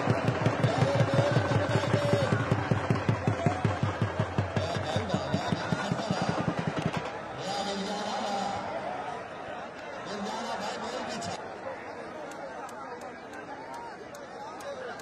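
From 6.20 s to 9.14 s a doubled audio track appears: a second, full-band copy trails the sound by about a tenth of a second, some 5 dB quieter, with no decay, switching on and off abruptly. Likely a second capture path or misaligned edit.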